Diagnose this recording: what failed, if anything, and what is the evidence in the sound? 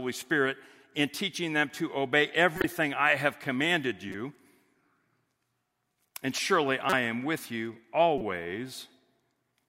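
Codec stage: corrupt frame decoded, four times, at 2.56–2.64 s (between "teaching them to obey" and "I have commanded"), 4.09–4.15 s, 6.90–6.93 s (before "am with you") and 8.18–8.21 s (after "am with you"). Damaged compressed frames were decoded anyway, so misread gains or codes put energy at wrong frequencies for a few frames each.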